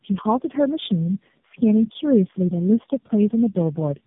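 Speech, with tandem speech coding throughout: it sounds rough, muffled and warbly, as if re-encoded by about four low-rate speech codecs in sequence, with nothing above 3.8 kHz.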